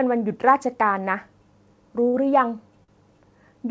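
Speech over a call path that tops out around 8 kHz, consistent with a wideband codec like G.722. There are two short stalls from late packets, at 2.08–2.16 s and 2.84–2.90 s. In each, the jitter buffer ran dry and the last sound was held for about 57 ms and 46 ms, then picked up where it left off with nothing lost.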